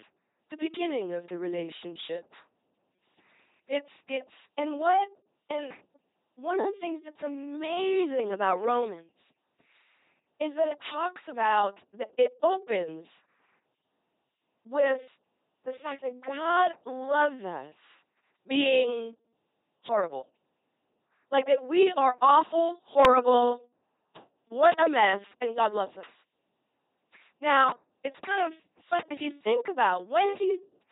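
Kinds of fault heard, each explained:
LPC-10 vocoder: the speech throughout has that heavy, buzzy robot quality of a model that rebuilds each moment from a small vocal-tract filter fed either a pulse buzz or noise. Nothing comes through above 3.8 kHz, and it sounds like a 2.4 kbit/s stream.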